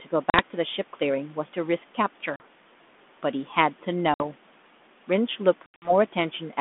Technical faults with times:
0.30-0.40 packet loss on an ADPCM call
2.36-2.41 packet loss on an ADPCM call
4.14-4.25 packet loss on an ADPCM call
5.66-5.92 packet loss on an ADPCM call

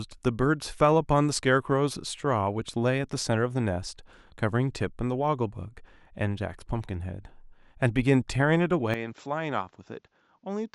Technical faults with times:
8.94-10.75 input switched to a poorer device

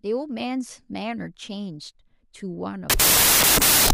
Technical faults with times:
2.90-3.93 wrong sample width

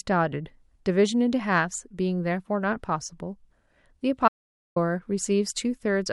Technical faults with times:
4.28-4.76 audio dropout to silence

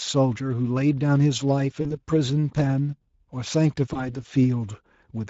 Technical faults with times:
0.00-5.30 Speex codec
1.81-1.98 VoIP packet loss concealed by the speech codec
3.93-4.24 VoIP packet loss concealed by the speech codec

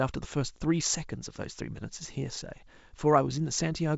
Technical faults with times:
none

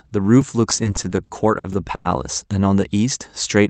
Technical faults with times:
0.42 repeated buffer
0.70-2.07 repeated stalls (stutter)
1.73 repeated buffer

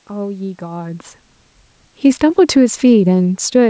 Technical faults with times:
1.96-3.69 automatic gain falling

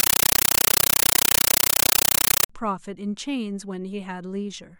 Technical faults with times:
0.00-2.49 compressed stream played as audio

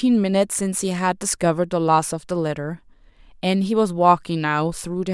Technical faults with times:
none

